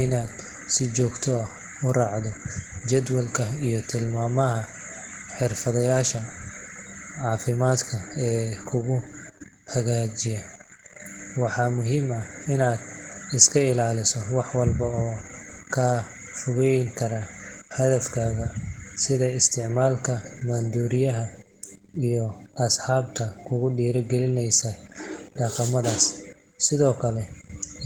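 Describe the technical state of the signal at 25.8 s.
At 25.8 s the speech carries Opus voice compression, present from start to end of the clip. The coder works in hybrid mode: linear-prediction coding below 8 kHz with a transform layer above, and content stops near 20.3 kHz. The damage is plainly audible, with the coarsely coded excitation giving the speech a hoarse, slightly synthetic texture. The degree of artefacting fits a bitrate around 16 kbps with 20 ms frames.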